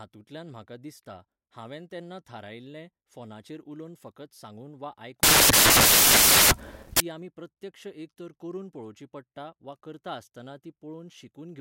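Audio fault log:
5.23 to 7.00 s, samples built from the wrong bytes: for about 1.8 s the reader assembles each sample from misaligned or swapped bytes, so the rapidly fluctuating low-order bits end up in the most significant position and dominate every value. The speech is replaced by loud, harsh broadband noise, close to white on the louder sounds, before the correctly decoded audio returns at 7.00 s.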